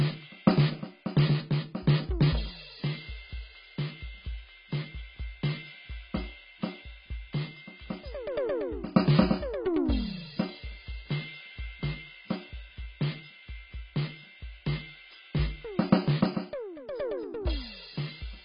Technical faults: AAC compression

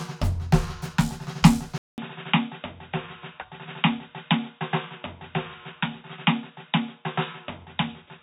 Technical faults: input switched to a poorer device

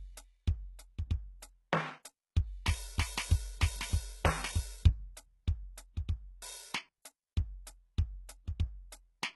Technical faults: HE-AAC compression

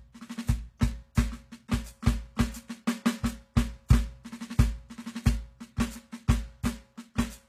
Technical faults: HE-AAC compression

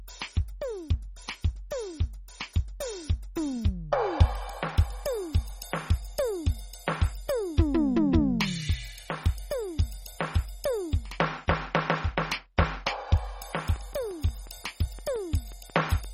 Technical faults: MP3 compression; train of clicks

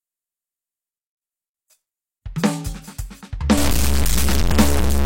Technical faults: low bit depth without dither

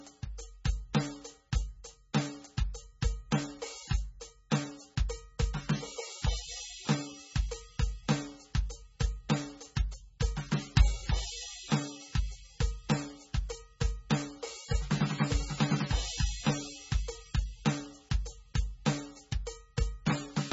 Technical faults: MP3 compression; sudden gain jump

